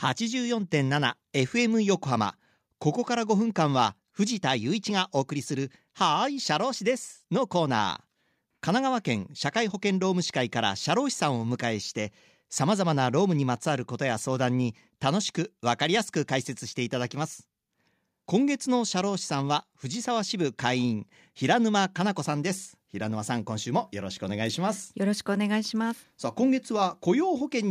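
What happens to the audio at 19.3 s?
Nothing goes wrong at 19.3 s; the speech there runs on intact, with no audible fault.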